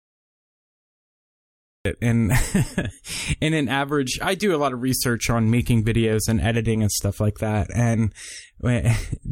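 The clip opens with a cut-off start. From 0 to 1.85 s there is only digital silence. Then the speech appears abruptly at 1.85 s, already under way. There is no natural onset and no fade-in. The capture or stream began late, after the speaker had started. So the opening of the utterance is simply missing. The first sound arrives at full level, as if switched on mid-sound.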